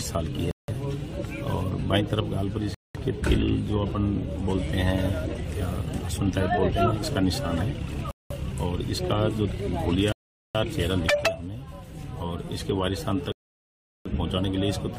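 At 0.51 s the audio drops to dead silence for 170 ms, then resumes. The same cut recurs at 2.74 s (204 ms), 8.11 s (194 ms), 10.12 s (424 ms) and 13.32 s (734 ms), the last two gaps much longer than the first three. The pattern points to a likely Bluetooth stall: delayed packets let the headphones' buffer empty, halting playback until retransmitted data arrived.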